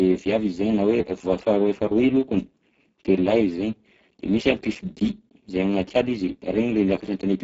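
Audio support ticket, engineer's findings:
Speex codec damage, heavy, whole clip. Speech hoarse, noisy, edging toward robotic; excitation starved at a rate consistent with about 6 kbps. Band above roughly 4 kHz reduced to shaped noise fill; nothing above 7.6 kHz. Low-quality CELP setting.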